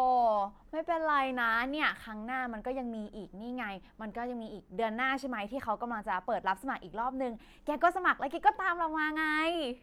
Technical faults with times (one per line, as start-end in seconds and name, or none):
none